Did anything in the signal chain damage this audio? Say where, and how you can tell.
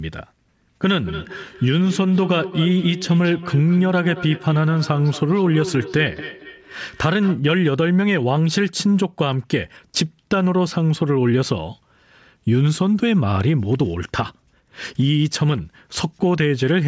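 Yes: feedback echo between two devices on the call, 1.03 to 7.44 s. Neither echo canceller removes the other's playback, so the sound returns roughly every fifth of a second, about 14 dB down.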